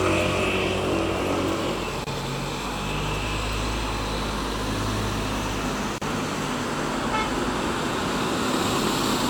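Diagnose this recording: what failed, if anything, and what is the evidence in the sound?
Codec: gaps at joins of encoded pieces. Gaps of 26 ms at 2.04 s, 35 ms at 5.98 s. Encoder delay and padding stayed in.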